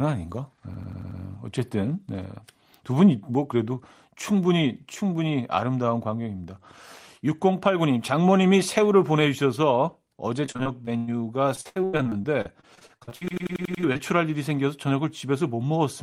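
System hang loops hit this speech clip at 0.74–1.21 s and again at 13.28–13.84 s. A 93 ms slice, consistent with a 4096-sample buffer, repeats five and then six times at 10.8 Hz, producing a machine-gun stutter with essentially nothing skipped. Repeated packet loss (robotic sound) runs from 10.46 to 11.09 s, with six gaps up to 103 ms, and from 11.55 to 14.01 s, with twenty-one gaps up to 83 ms. Each hole is patched by extending the preceding sound, and about a third of each stretch is filled this way, so the audio turns choppy with pieces missing.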